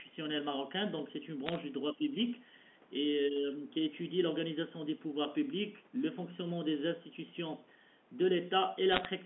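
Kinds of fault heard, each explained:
Bit errors on a digital phone line: flipped bits on the A-law line corrupt single samples, and hits on the sign or high bits jump the waveform, so sharp crackling ticks sit over unchanged speech at 1.46–1.58 s and 8.92–9.06 s, roughly 0.4–0.5 percent of bits wrong.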